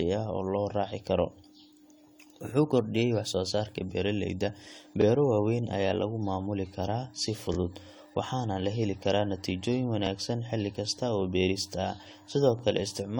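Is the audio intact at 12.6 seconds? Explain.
No. From 12.59 to 12.62 s there is a brief stutter, with a click-like hiccup where about 25 ms of sound plays twice. This is overlapping chunks: the audio was handled in 2.5 s chunks, and the next chunk began before the previous one ended, so a short slice repeats at the join.

Underneath, the sound at this moment is swirly, smeared and hollow, with softened attacks. That points to generation loss, likely from repeated AAC-LC encoding at around 64 kbit/s, roughly five passes, each adding fresh quantisation noise.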